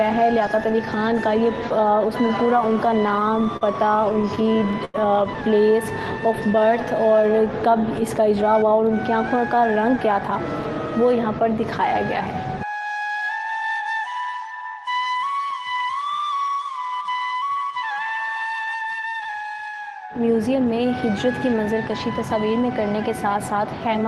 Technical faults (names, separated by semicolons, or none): repeated stalls (stutter); jitter buffer speed-up